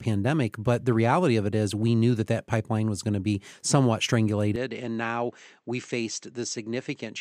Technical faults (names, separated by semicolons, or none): input switched to a poorer device